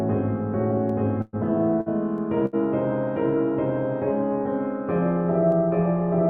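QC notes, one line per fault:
0.90 s and 5.52 s, dropped samples: single sharp clicks, each likely from a few samples missing, far too short to remove any audible sound, unlike a gap.
1.21–1.36 s, 1.81–1.89 s, 2.46–2.56 s, burst of packet loss: the last sound is held and fades instead of going silent, then resumes with about 120, 60 and 60 ms missing.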